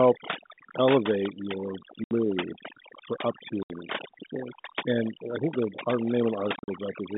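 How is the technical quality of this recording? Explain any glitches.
The recording has two clear problems: heavy-handed noise reduction across the whole clip, and three dropouts from lost packets.

Overdone noise removal runs from start to finish. A noise reduction stage set far too aggressively pulls down any frequency band that sits close to its idea of the noise floor, and the softer parts of the speech get pulled down with it. The background becomes almost silent apart from small twinkling specks, and the quieter detail of the voice is hollowed out.

Packet loss filled with silence hits at 2.04 to 2.11 s and again at 3.63 to 3.70 s, each a 70 ms hole. Near 6.56 to 6.68 s about 100 ms goes missing in scattered pieces over 120 ms, the longest run 40 ms. Lost audio packets were replaced with dead silence instead of being concealed, so the speech is cut off abruptly at hard edges. The gap lengths fit 10 ms packets.

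The narrow telephone band of the G.711 line is audible underneath these faults.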